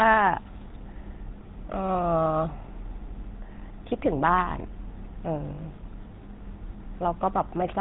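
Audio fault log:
throughout, GSM full-rate codec: the speech has a plainly audible buzzy, gravelly roughness and a dull top with nothing above 4 kHz. The codec rebuilds speech from a vocal-tract model fed by coarse, regularly spaced pulses, which fits a 13 kbps stream.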